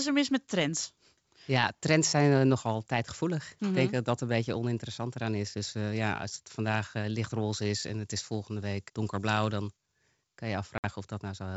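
A speech recording carried over a wideband G.722 telephone link, with two faults. From 7.51 to 9.80 s, between "als het vandaag eh" and "kan je", pre-emphasis is left on. The treble boost follows the CD 50/15 µs curve, but the matching de-emphasis was never applied. So the top end sits about 8 dB high at 10 kHz relative to 1 kHz. The speech turns thin and bright here. Sibilants hiss and sting. Just after "kan je", from 10.78 to 10.85 s, there is packet loss on the ADPCM call. About 60 ms of audio drops out, likely a few packets. The gap is filled with hard-edged silence. The decoder's adaptive predictor and step size lose sync with the sender during that hole. When speech resumes, it comes back slightly distorted. It settles within some tens of milliseconds.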